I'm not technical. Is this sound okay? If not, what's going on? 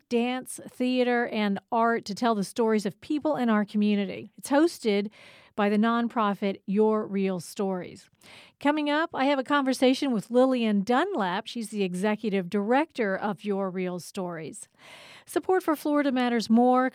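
No. Sample clock jitter appears from 14.21 to 15.99 s. The part of the recorder that samples the speech relies on a steady internal clock, and here that clock wobbles by under a microsecond, so each sample is grabbed a touch too early or too late. Those tiny timing slips turn into a faint hiss or grittiness riding on the speech, strongest on loud and bright sounds and gone in the pauses.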